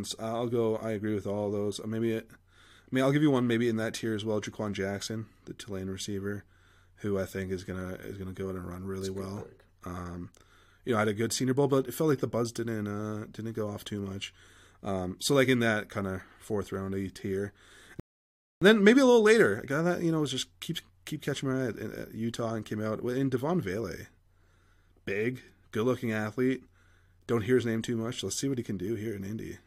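At 18.00 s, right after "of fourth round tier", a rebuffering stall drops the speech into silence for about 0.62 s, then it resumes cleanly at "and then maybe a".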